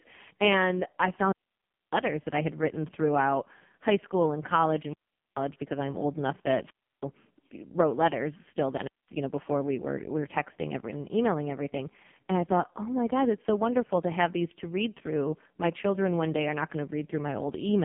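From the start and through the whole clip, the speech carries heavy AMR narrowband mobile codec damage. The voice is buzzy and synthetic, the sound you get when a vocal-tract model is fed too few pulses per frame, which fits the lowest AMR-NB mode near 4.75 kbps. On a spectrogram the energy sits in a band from 150 Hz to 3.4 kHz with a hard, empty ceiling above it.

Four wireless microphone squelch dropouts interrupt the first nine seconds or so: 1.09 to 2.13 s, 4.81 to 5.43 s, 6.63 to 7.04 s and 8.74 to 9.15 s. In each, the FM radio link fades, hiss swells briefly, and then the receiver's squelch cuts the output. The muted stretches shrink from about 0.61 s to 0.43, 0.33 and 0.21 s. A waveform shows a short noisy smear, then a flat line before the signal returns, and a spectrogram shows a broadband haze followed by a blank vertical gap.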